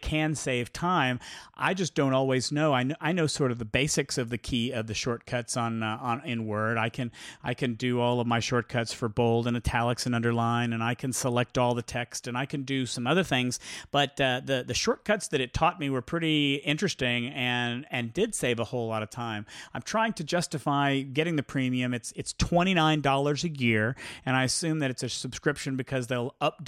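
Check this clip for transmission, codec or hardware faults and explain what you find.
One fault stands out, a drift correction step in the speech. It runs from 12.94 to 14.79 s, starting after "and I can do" and ending before "that it taught me". For those 1.85 s the audio plays about 5.6% fast. Pitch rises by about 94 cents, close to a semitone. Then both snap back at once. The likely cause is clock-matching software jumping its playback rate to rebalance a buffer. The voice sounds briefly hurried and sharp.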